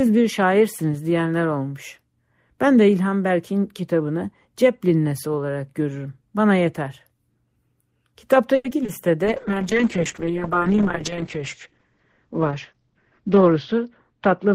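From 8.55 to 8.90 s, repeated packet loss (robotic sound) occurs: four separate stretches of audio go missing in quick succession, the longest 90 ms. Each hole is patched by extending the previous sound, covering about 130 ms, while about 60 ms is simply lost. Over a third of that span is patched, so the sound turns choppy and mechanical.

At 9.25 s a call bitrate drop begins and lasts through the end of the clip. The encoder, starved of bandwidth, codes far more coarsely, which fits a fall from about 32 to 8 kbps held at its lowest for about 3.7 s. The audio bandwidth shrinks from 20 kHz to 8 kHz, so the sound becomes muffled and rough.

From 12.73 to 13.21 s, inside that degraded stretch, a jitter buffer speed-up trims excess buffered delay by cutting short pitch-period slices, removing around 50 ms in total. Playback runs at 110% speed with unchanged pitch, so the sound briefly feels hurried.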